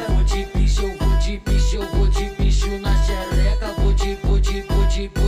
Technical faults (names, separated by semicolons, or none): channel delay (comb filtering)